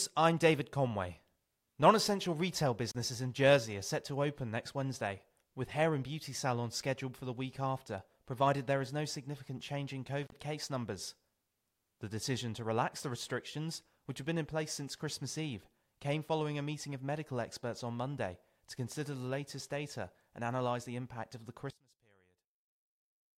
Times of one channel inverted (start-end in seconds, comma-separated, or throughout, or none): 21.70-23.37